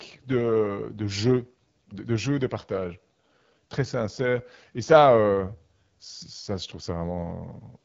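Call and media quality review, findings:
AMR wideband (HD Voice) codec, whole clip: speech sounds rough and raspy, with plainly audible coding damage. Nothing above about 7.5 kHz, and the top band is thin, noise-filled hiss rather than real detail. The roughness fits one of the two lowest AMR-WB modes, around 8.85 kbit/s. At that rate the pulse-driven vocal tract model has too few bits to track the speech cleanly.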